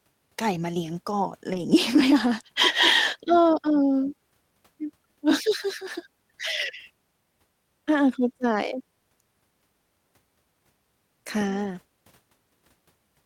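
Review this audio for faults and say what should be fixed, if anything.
From about 1.53 to 1.59 s there's a lost packet rebuilt from error correction. Around 40 ms of the speech comes out rougher and a bit noisy, which fits two 20 ms Opus packets going missing and the decoder playing the low-bitrate backup copies carried in the following packets. There's no gap, but the texture dips. More jitter buffering or a cleaner network path would keep those packets from being lost at all.

There are also two isolated clicks, one at 5.62 s and one at 8.73 s. Each is a single sharp tick, a thin vertical stripe in the spectrogram, and the likely cause is dropped samples. A handful of samples vanish, so the waveform jumps straight to a later value. That's far too short to lose any sound, but the step is audible. Fixing buffer underruns or sample-rate handoffs in the capture or playback chain should stop these.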